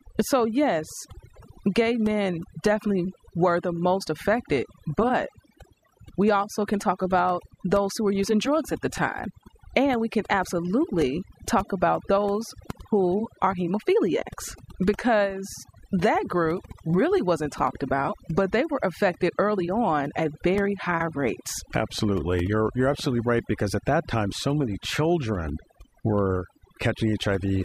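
Overdone noise removal runs through the whole speech recording. The noise reduction was set too strong. Frequency bands near its noise estimate get pulled down or shut off, taking quiet parts of the voice too. Background drops and breaks up into twinkling, warbling specks.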